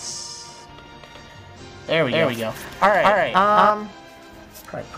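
From 2.12 s to 3.7 s, a doubled audio track appears, likely because a second, slower capture path feeds the same signal into the mix. A full-band copy trails the original by roughly 200 ms at about equal loudness, so every sound is repeated as a distinct slapback with no decay or room colour. The copy switches on abruptly at 2.12 s and cuts off just as suddenly at 3.7 s.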